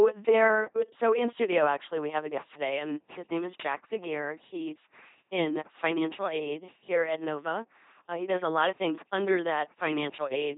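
Throughout, the speech sounds like a buzzing robot with stray hiss and nothing above 3.8 kHz, the heavy damage of an LPC-10 vocoder, which fits 2.4 kbit/s.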